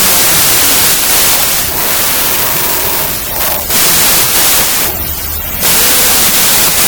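Throughout the clip, wrong sample width: the audio plays at two-thirds speed and pitch under loud noise, which fits packed 24-bit data read as 16-bit samples.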